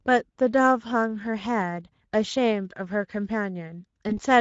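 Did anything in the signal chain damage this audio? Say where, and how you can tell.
Yes. Codec stage: the Speex codec runs throughout this speech, sounding noisy and hoarse. Starved excitation bits, at a rate fitting roughly 16.8 kbps, cause it.

Network stage: VoIP packet loss concealed by the speech codec at 4.09 to 4.13 s. About 20 ms is extrapolated from the last pitch, fading.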